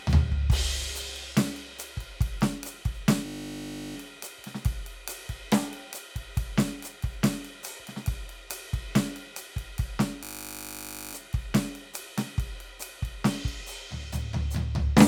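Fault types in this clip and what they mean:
System hang loop: the playback system froze while the sound hardware kept replaying its ring buffer, so one 20 ms slice of the music repeats exactly at 50 Hz, heard as a steady buzz from 3.26 to 3.96 s and 10.24 to 11.14 s. The music then resumes with little or nothing skipped. The waveform shows an identical 20 ms cycle tiled end to end, and the spectrogram shows frozen horizontal harmonics spaced 50 Hz apart.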